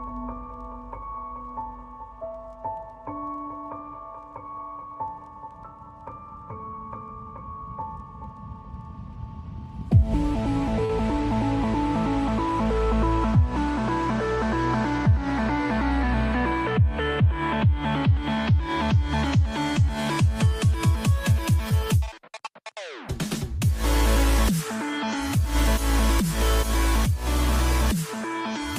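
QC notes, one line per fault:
10.85–10.90 s, short concealed packet loss: about 40 ms of audio arrived too late to decode, and the receiver bridged 36 ms of it by extending the preceding sound before blending back, so it is heard as a brief smear rather than a silent dropout or a sharp click.
21.69–21.71 s, short concealed packet loss: a 10 ms hole was patched the same way, leaving only a brief smear or wobble with no gap of silence.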